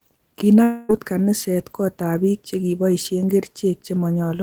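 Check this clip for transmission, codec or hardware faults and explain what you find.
One fault is present in the speech. From 0.63 to 0.91 s there is a long network dropout, likely a run of lost packets. The receiver conceals the gap by stretching the last sound into a buzzy tail that fades over about 255 ms, with no fully silent gap. Speech resumes at "kaniset kot ab biik" with 260 ms of the original audio missing.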